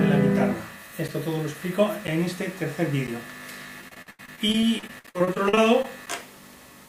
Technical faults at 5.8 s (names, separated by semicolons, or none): periodic USB or driver dropouts; repeated packet loss (robotic sound)